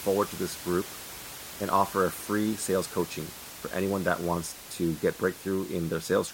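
Nothing stood out on listening to this speech recording, and the room noise sits about 14 dB below the speech.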